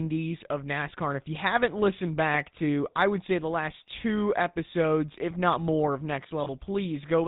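GSM full-rate codec, from start to end: the speech has the plainly audible buzzy, gravelly texture of this early mobile codec, consistent with its 13 kbps rate. The codec models the vocal tract as a filter and drives it with a sparse train of regular pulses, keeping only one excitation sample in three, so the fine detail of the voice is replaced by a coarse, rasping buzz. Nothing above 4 kHz gets through, which leaves the sound dull and narrow.

Lost GSM frames, 6.44 to 6.50 s, right after "if not more of": a brief rough, metallic ring briefly replaces the speech. The decoder stood in for a missing frame by reusing the settings of the last good one, so the sound holds on instead of moving forward. The gap heard is short and fits the loss of a single 20 ms frame, too brief to fade to silence before normal decoding resumes.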